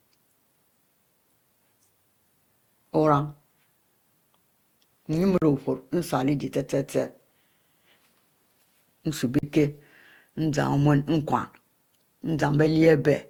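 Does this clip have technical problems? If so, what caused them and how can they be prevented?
Yes. The speech sounds swirly, smeared and hollow throughout, and the attacks of consonants blur. This is generation loss, and the likely cause is repeated lossy coding, about five passes through a codec like Opus at 64 kbit/s. Each pass quantises again on a shifted frame grid, so the noise and spectral holes pile up. The damage goes beyond what one pass at that rate would cause. To prevent it, keep a lossless master and encode only once, at the end.

There are two blocks of digital silence, from 5.38 to 5.42 s and from 9.39 to 9.43 s. Each lasts about 43 ms, which fits a 2048-sample buffer left unfilled. The audio drops straight to silence and returns with no fade, so every event is heard as a short hole. This usually means the program missed its buffer deadline. To prevent it, use larger buffers or give the audio thread higher priority.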